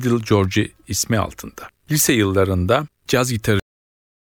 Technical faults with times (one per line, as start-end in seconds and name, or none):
3.60-4.25 cut-off end